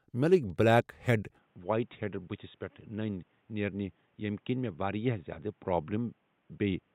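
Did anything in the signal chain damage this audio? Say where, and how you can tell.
Yes, at the input stage: from 1.39 s nothing passes above 3.8 kHz, the level falls about 5 dB and new hiss appears. That points to the input switched to a poorer device. A filter alone would not add fresh noise.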